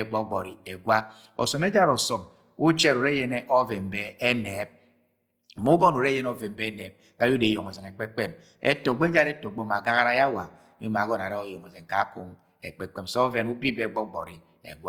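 From start to finish the speech has a grainy, rough texture, with a fizzy noisiness riding on it rather than the hollow swirl you'd get from MP3. That's Opus compression, likely in its music-oriented CELT mode at a low rate, something around 24 kbps. Instead of leaving gaps, the encoder keeps each band's energy and patches starved bands with folded or noise-like content. The bandwidth still stays full, reaching up to about 20.3 kHz.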